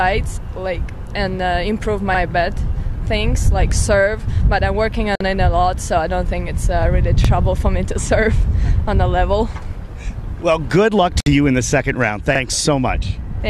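At 2.15 s a small stutter breaks the flow, a 50 ms stretch of sound playing twice in a row. The same catch returns at 7.25 s and 12.35 s, about every 5 s. These are overlapping chunks: the audio was handled in blocks of roughly 5 s, and each block began 50 ms before the previous one had finished, so that sliver is doubled at every join.

At 5.15 s the sound drops out for 50 ms and then resumes exactly where it left off. The edges of the silence are smeared. A second dropout of about 59 ms opens at 11.2 s, some 6 s later. Each is a gap at a join of encoded pieces. The audio was encoded in separate segments about 6 s long and then joined without trimming, so each encoder's start-up delay and the padding on the previous segment's last frame remain as silence.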